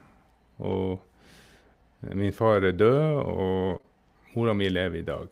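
At 0.67 to 0.73 s the speech turns briefly rough and grainy for about 40 ms but never drops out. That is a lost packet rebuilt from error correction: the lost audio, which fits two 20 ms packets, was replaced by the low-bitrate backup copy carried in the following packet, so continuity held while detail suffered. The same coarse patch returns at 3.69 to 3.75 s. Right after it, from 3.77 to 3.85 s, the sound briefly smears and wobbles. This is short concealed packet loss in two back-to-back 20 ms holes. The decoder bridged each by extending the preceding sound, then blended back into the real signal.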